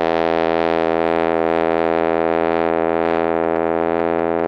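From about 3.06 s to 4.45 s there's a train of clicks riding over the music: roughly ten sharp ticks, averaging around 7.2 per second but spaced unevenly, so it stutters rather than keeps time. They're much alike in shape and poke out about 5 dB above the music. Something was injecting short pulses into the signal, likely interference from nearby gear or a faulty connection or power supply.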